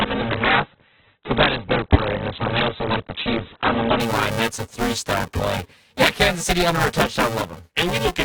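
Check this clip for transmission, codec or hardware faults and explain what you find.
Two faults are present: buffer tearing across the whole recording, and a stream that begins at low quality and steps up at 4.0 s.

Buffer tearing runs throughout. The writer and the reading hardware have drifted so their positions cross inside each period, leaving about half of every buffer filled with audio roughly 10 ms stale, bounded by hard joins. This gives a robotic buzz at 345 Hz, which fits a 128-sample buffer. The buzz is heard only while speech is present. On the waveform, regular discontinuities appear at that spacing. On a spectrogram, they show as a harmonic comb.

The adaptive stream starting at a low bitrate affects 0 to 4.0 s. The player opened on a cheap rendition to start quickly, then switched once it had gauged the connection. Before the switch, nothing reaches above 4.4 kHz, consistent with something like 8 kbit/s Opus, so speech sounds dull and smeared. 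At 4.0 s, the spectrogram's hard ceiling abruptly lifts with no gap, and the treble returns.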